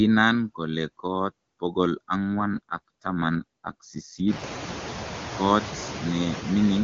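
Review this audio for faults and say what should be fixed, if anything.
Noise suppressor artifacts run throughout: the suppressor lowers bands it takes for steady noise by only about 2 dB, so the noise sinks between phrases and rises under them. Prevent this by tuning the suppressor for smoother gain changes across frames and bands.

AMR rate drop from 2.16 to 4.44 s: the bandwidth holds with no gap, but speech turns rougher and more synthetic, which fits a switch from 23.85 to 8.85 kbit/s to protect a weak link. It recovers after 4.44 s, before the room noise rises at around 4.5 s. Prevent this by improving radio coverage or link margin so the network has no need to lower the codec rate.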